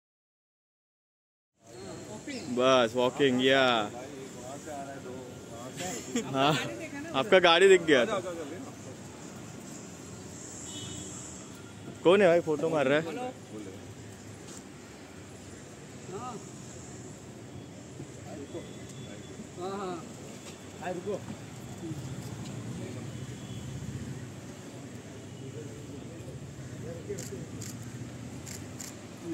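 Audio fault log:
Nothing to log here; the sound just eases in gently from about 1.5 s, settling in by about 1.97 s, and there's nothing amiss to report.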